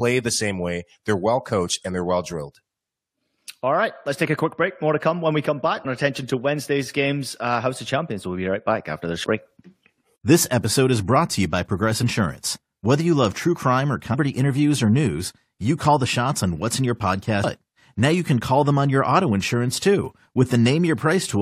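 A speech recording with damaged data in a compressed stream, heard as brief chirps or blips at 5.84, 9.23, 12.02, 14.13 and 17.43 s. At each point corrupted bytes cause the decoder to misread a frame and lose sync before it recovers at the next valid frame header.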